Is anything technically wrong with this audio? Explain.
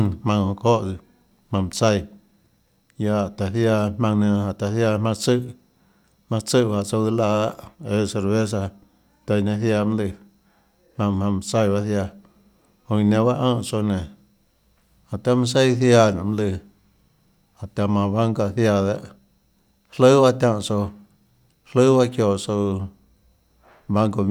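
No, nothing in this speech recording points to a technical fault.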